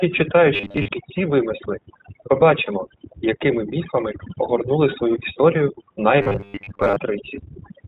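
Throughout the speech, overdone noise removal leaves the background near-silent but sprinkled with twinkling specks. Quiet bands sitting close to the noise estimate were pulled down along with the hiss. The speech is spectrally pitted, not muffled.

Also present from start to finish is the iLBC codec. Nothing above 4 kHz survives, and the speech takes on a slightly rough, synthetic grain. The artefacts are plainly audible and fit iLBC's 20 ms frame mode. The roughness is even and frame-based rather than coming in bursts like packet loss.

From 0.54 to 0.89 s and again from 6.22 to 6.98 s, the speech turns into a rigid, metallic 100 Hz buzz that still loosely follows the words. This is robotic sound from repeated short buffers, likely caused by a roughly 10 ms block being looped while new audio arrived late. Most of the first stretch and about half of the second was repeated. The fixed pitch sets it apart from the codec's general roughness.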